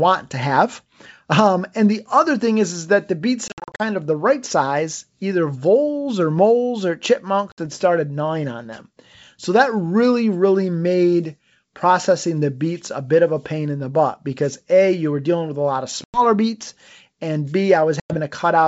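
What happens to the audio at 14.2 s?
Nothing goes wrong at 14.2 s: the speech carries on intact through the G.722 wideband telephone coding at 64 kbit/s, with at most faint coding hiss.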